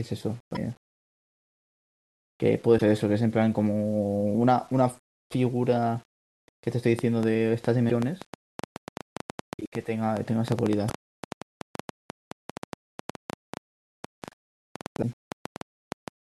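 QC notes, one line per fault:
throughout: low bit depth without dither. The speech sounds coarse and grainy, and the grit rises and falls with the level of the voice instead of sitting underneath it as a steady hiss. That happens when the audio is held to very few levels, which here likely means 8-bit rounding with no dither. Each sample is pushed to the nearest step, so the error follows the signal. The result is distortion roughly 35 dB below the speech, and the quiet tails and pauses go rough and sputtery.
0.52–0.57 s, 2.75–2.82 s, 7.86–7.91 s, 10.86–10.91 s, 14.99–15.04 s: damaged data in a compressed stream. Each of these is a short squawk or blip about 50 to 70 ms long. A stretch of corrupted data in the encoded stream made the decoder misread the frames there. It then lost its place and had to search for the next valid frame header, so a burst of garbage came out.
6.99–16.09 s: train of clicks. 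For about the last nine seconds, ticks and pops run over the speech and through the pauses. There are roughly 70 of them, averaging 6.86 per second at an uneven pace, and they peak around 10 dB above the speech. The clicks are all much the same shape, which points to a repeating pulse added from outside the audio itself, likely electrical interference or a struggling interface.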